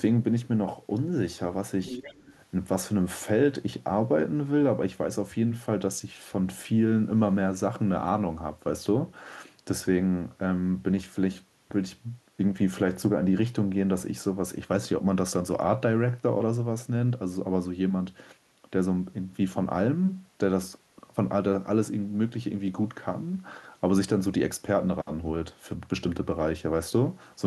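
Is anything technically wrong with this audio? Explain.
Yes. From 1.85 to 2.36 s the other side's voice leaks through, about 10 dB below the main speech, most likely because the echo canceller left loudspeaker playback in the microphone signal. It sounds like a faint second talker; a spectrogram shows a weaker, overlapping harmonic pattern in that window.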